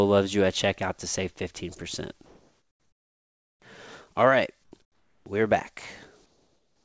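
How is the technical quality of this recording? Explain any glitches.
The speech has background glitches in its pauses, and the call-codec path limits the audio to nothing above 8 kHz, which fits a wideband codec such as G.722. Comfort noise in place of the background appears at 2.26–3.62, 4.64–4.72, 4.82–5.26 and 6.26 s to the end. The likely cause is discontinuous transmission: the receiver synthesises steady, featureless noise, about 1, 4, 8 and 6 dB quieter respectively, instead of the real background.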